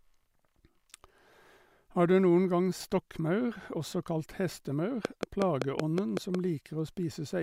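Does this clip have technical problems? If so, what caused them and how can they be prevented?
Yes. At 2.80 s, just after "du noen gang", the speech lurches forward, and roughly a third of a second of audio is simply gone. This is compressed frames skipped: whole frames of the coded stream were missing or rejected as damaged, so the decoder jumped ahead. The gap points to about ten frames of roughly 26 ms each. Preventing it means checking file integrity after transfer and using error-protected storage or streaming so no frames arrive corrupt.

From 5.05 to 6.36 s, right after "også kalt hestemaur", a regular ticking runs over the speech at about 5.4 clicks per second. That is roughly seven sharp, near-identical pops standing around 20 dB above the speech. This train of clicks is likely electrical interference from nearby equipment or a faulty connection or power supply, injecting the same pulse at a steady rate. 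Keeping cables and the interface away from noisy devices, and checking connections and the power supply, prevents it.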